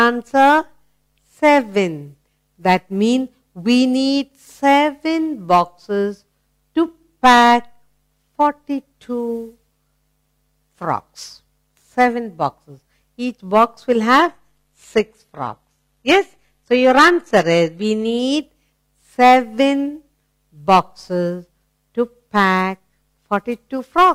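From 14.19 to 18.19 s the adaptive stream dropped to a lower bitrate, likely a low-rate HE-AAC version, so the treble abruptly cuts off above 14.9 kHz, and codec artefacts rise, with no gap.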